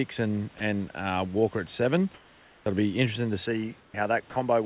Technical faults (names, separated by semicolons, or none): sound dropped by the voice detector; comfort noise in place of the background; input switched to a poorer device; onset clipped by the voice detector